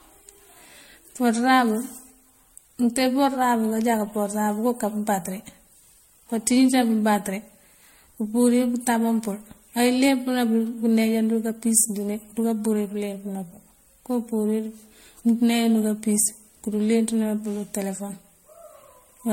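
Throughout, speech sounds swirly and hollow with smeared attacks, likely generation loss from about five MP3 re-encodes; a spectrogram shows flickering holes, empty above 16.5 kHz.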